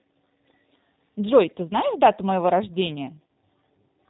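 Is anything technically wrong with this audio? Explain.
Yes, there are two faults.

The G.729 codec affects the whole speech clip. This 8 kbit/s VoIP coder rebuilds the voice from a vocal-tract filter, a pitch predictor and a few pulses per frame, and it discards everything above 4 kHz. The result is plainly audible: dull, slightly rough, synthetic-sounding speech.

VoIP packet loss, concealed by the speech codec, occurs from 3.27 to 3.29 s. About 20 ms of audio is missing, which fits a single lost packet. The decoder filled the gap by extending its last pitch and filter settings at falling gain, so this moment sounds briefly smeared, with a short dip in level.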